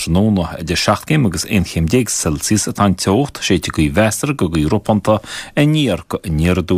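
No technical faults can be heard anywhere in the recording.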